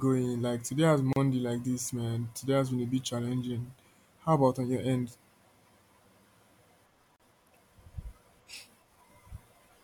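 At 1.13 s, after "today has" and before "like this man", and again at 7.16 s, a roughly 34 ms gap at a join of encoded pieces cuts the speech: untrimmed encoder delay and end padding, repeating every 6.0 s.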